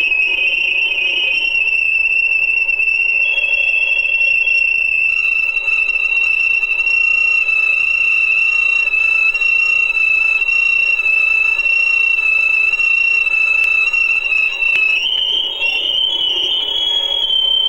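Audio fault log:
13.64 s and 14.76 s, dropped buffer (overrun): the likely cause is the hardware overwriting samples before the program collected them, so about 10 ms and then about 40 ms of audio vanish. With no silence in the gap, each join gives a sudden skip ahead in the sound.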